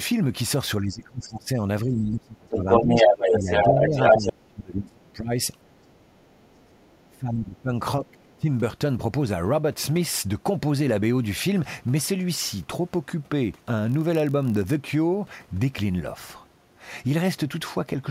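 Through the first half, the talker keeps ducking out: at 0.82–1.63, 1.84–3.96, 4.18–5.32, 5.66–6.29, 7.08–7.72 and 8.01–8.49 s the level drops by up to around 25 to 30 dB and comes back in pieces. That's most likely speech suppressed in double talk, with the echo canceller clamping both voices at once.

Overlapping that, from 2.51 to 4.32 s the other side's voice is leaking through, and it's loud, roughly on par with or a bit above the talker. It comes back faintly at 6.34–6.97 s, way down, barely there. Likely residual loudspeaker echo the canceller didn't remove.

Then from 13.87 to 14.77 s there's a block size mismatch (padded). A stage writes short blocks and the rest gets zero-filled, giving a 43.1 Hz buzz, which fits a 1024-sample read. The slowdown is tiny (0.999x).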